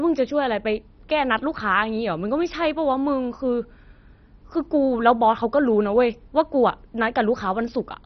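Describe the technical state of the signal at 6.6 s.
At 6.6 s the speech sounds dull and gurgling, likely from MP2 compression lasting the whole clip. Starved upper sub-bands vanish, and a spectrogram shows flickering bands under a hard ceiling at 6.1 kHz.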